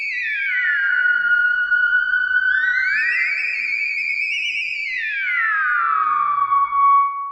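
Nothing here stands out as a technical problem, and the audio just runs along steadily with nothing catching the ear from beginning to end.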